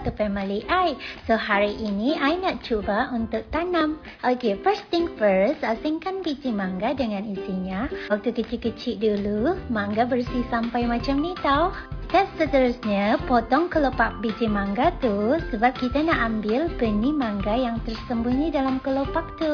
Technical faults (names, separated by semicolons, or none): none